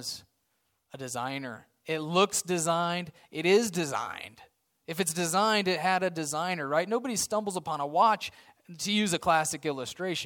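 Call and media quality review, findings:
No call or media quality findings to report for this speech clip.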